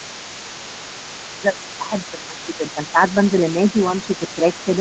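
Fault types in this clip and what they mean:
Other side's voice leaking through: a faint second voice sits under the talker for the whole clip, roughly 20 dB down. That's likely the far end playing on a loudspeaker, with the echo canceller not fully scrubbing it from the mic.
Speech suppressed in double talk: the talker's level sags by a few dB in patches between 1.79 and 3.17 s, and again briefly from 4.07 to 4.45 s, while that other voice overlaps. The canceller is likely turning everything down when both sides talk at once.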